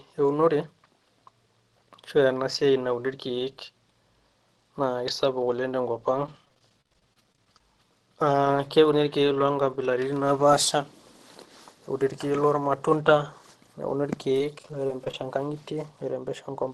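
Repeated packet loss (robotic sound) appears from 6.16 to 7.60 s, right after "kisapuk oleng tenkop". Audio keeps dropping out in short holes, the longest about 44 ms. Each hole is patched by extending the preceding sound, so about a fifth of that span is concealment, heard as choppy and robotic. It returns more lightly from 14.30 to 15.22 s after "lormatunda neuni", where the gaps are no longer than 21 ms and cover about 8% of the stretch. Through both, the call coding limits the band to about 12 kHz.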